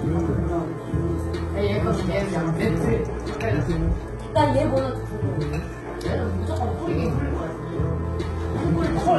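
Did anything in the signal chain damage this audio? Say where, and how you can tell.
Yes, at the codec stage: HE-AAC compression runs throughout the clip. The treble sounds bright yet synthetic, with a gritty, metallic sheen where upper harmonics fail to line up with the lower band, and nothing at all comes through above 11.8 kHz. That pattern points to heavy coding at a very low bitrate, around 16 kbps, likely HE-AAC rebuilding the top octaves by spectral band replication, which copies lower bands upward under a coarse envelope.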